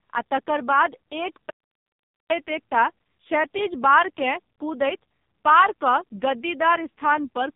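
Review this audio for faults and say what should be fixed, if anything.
The whole clip has AMR narrowband mobile codec damage: nothing above 3.7 kHz, and heavy buzzy, synthetic coloration that fits a very low bitrate near 5 kbps. Prevent it by capturing or transferring through a wideband path instead of a narrowband mobile link.

An audio dropout to silence runs from 1.50 to 2.30 s. About 0.8 s of speech is replaced by silence with no room tone, likely from a momentary input loss or link failure. Prevent it by securing the input connection and monitoring the link during recording.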